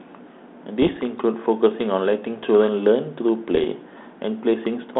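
Speech carried over what sounds like a G.726 ADPCM link at 32 kbit/s, band-limited to about 200 Hz to 3.6 kHz, with two short patches of bit errors on the ADPCM link, at 0.82 to 0.98 s and 3.51 to 3.68 s. Each patch is a cluster of pops and rough, gritty bursts with quick level jumps. A flipped bit throws off the decoder's step size and predictor, so the damage rings on briefly. The error rate sounds like a few tenths of a percent.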